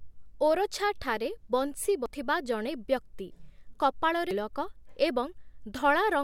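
At 2.06 s the speech skips forward. Roughly a third of a second is gone, and the two sides meet with no gap of silence. At 4.31 s the same jump happens again, with a similar amount lost. This is audio missing between chunks. The likely cause is a recorder or processor that handles the sound in 2.5 s chunks. It drops a short piece each time it closes one chunk and opens the next.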